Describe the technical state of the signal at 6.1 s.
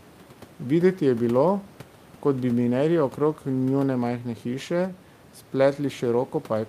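At 6.1 s the signal is intact, with only the room's own background noise sitting about 26 dB below the speech.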